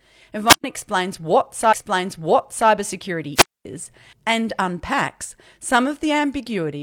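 At 0.48 s the radio link of a wireless microphone fades far enough that the receiver's squelch closes, producing a wireless microphone squelch dropout: a swell of hiss, then about 0.11 s of near silence before "explains what" arrives. The same dropout recurs from 3.35 to 3.65 s, with a longer mute of about 0.24 s ahead of "and unpacks".

Between these, at 1.69 s, the player delivers one stream segment twice. This stream segment repeated event adds about 0.98 s, so the stretch following "explains what" plays again until 2.67 s, with a small blip at the jump back.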